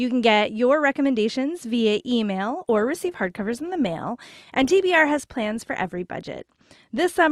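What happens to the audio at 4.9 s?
At 4.9 s the speech is inside an adaptive stream at a lower bitrate stretch, running from 2.47 s after "get your recommendations via" to the end. The stream switched to a leaner encoding, which fits a drop from 64 to 24 kbit/s Opus, so codec artefacts rise. Unlike a dropout, the quality changes suddenly with no gap.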